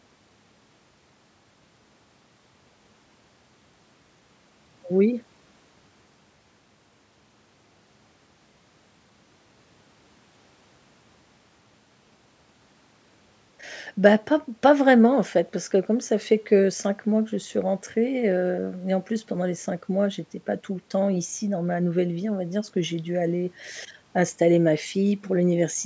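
The speech shows no technical faults, only the ordinary signature of call microphone processing, with the lowest bass trimmed and nothing present above 8 kHz.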